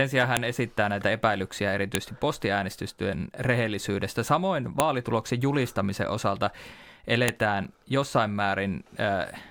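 File header played as audio occurs at 0.37, 1.95, 4.80 and 7.29 s, each heard as a sharp, loud click or snap that cuts through the speech regardless of what is being said. The speech was evidently assembled from separate WAV pieces joined or streamed with their headers left in place, so the few dozen bytes of header data at the start of each piece were interpreted as audio samples, producing a brief burst of arbitrary values at every join.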